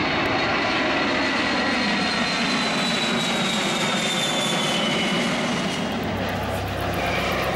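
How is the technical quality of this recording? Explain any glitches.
No glitches or technical faults can be heard anywhere in the recording. The sound stays steady and continuous, with no disruptions to explain.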